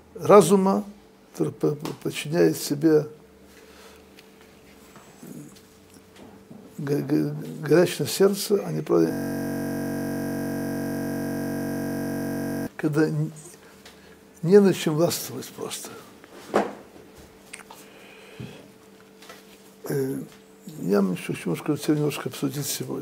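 From 9.13 to 12.67 s the audio collapses into a steady buzz near 46.9 Hz. This is a system hang loop: the system froze while the hardware kept replaying one 21.33 ms slice, which fits a 1024-sample buffer, well over a hundred times.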